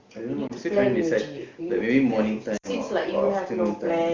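At 0.48–0.52 s and 2.57–2.69 s, lost AMR speech frames: the decoder concealed corrupted frames with repeated, decaying parameters, giving a brief dip, then a longer loss of about 60 ms that drops to near silence within two frames.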